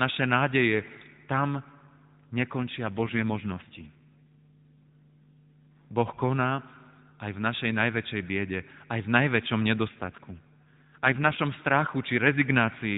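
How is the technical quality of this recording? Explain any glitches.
The recording comes through a narrowband mobile link, with nothing above 4 kHz, and it has two AMR rate drops, from 2.98 to 5.97 s and from 9.88 to 11.41 s. In each stretch the network has told the AMR-NB codec to spend fewer bits on the speech itself, which fits a step down from 12.2 to 5.9 kbps. The speech turns buzzier and more synthetic, then recovers when the rate returns. Unlike a dropout or a bandwidth change, there is no gap and the band stays the same; only the texture coarsens.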